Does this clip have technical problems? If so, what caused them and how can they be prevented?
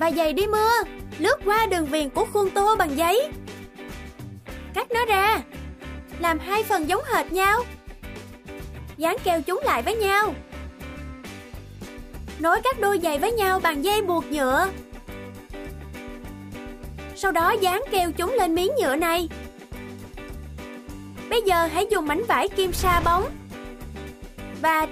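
No, there are no faults.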